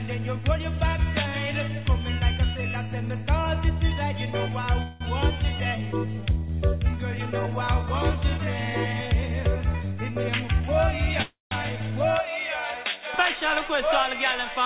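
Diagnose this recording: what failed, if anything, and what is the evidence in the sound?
Call audio freeze at 4.82 to 5.03 s and again at 11.22 to 11.54 s, in the network and jitter buffer stage. At each point the sound stalls and the last fragment is stretched into a fading buzz, about 184 ms the first time and 292 ms the second, where the final 150 ms decays to silence. The audio then resumes exactly where it stopped, with nothing lost. The likely cause is delayed packets draining the jitter buffer, which adds that stall time to the playout delay.

Jitter buffer speed-up from 10.26 to 10.86 s, also in the jitter buffer. Over about 0.6 s the sound runs at roughly 107% speed with its pitch unchanged, so that stretch feels hurried. The receiver had more audio queued than it wanted and cut repeated short, pitch-period-length slices, about 50 ms in total, to bring the delay back down. Throughout, the band stops at 4 kHz, which fits a narrowband G.711 A-law call path at 64 kbps.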